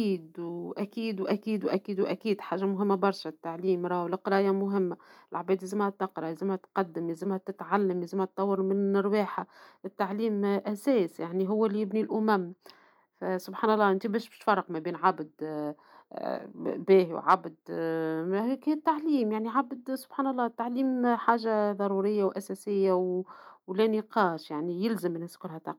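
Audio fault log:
No faults are heard anywhere in this speech recording. Nothing in it calls for a time, a value or a cause in this log.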